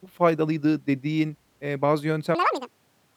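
Audio read two samples at a time (double speed) begins at 2.35 s, right after "faydalıydı dediğin eee bazı", and runs to the end of the clip at 3.17 s. The reader treats each pair of samples as a single frame, as if the stream held two channels or samples twice as wide. The speech therefore plays at twice its proper rate and a full octave (12 semitones) higher.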